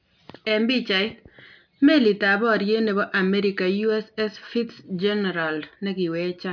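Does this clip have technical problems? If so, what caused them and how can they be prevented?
No, the speech comes through with a steady, intact signal and nothing in it points to a technical problem that needs fixing or preventing.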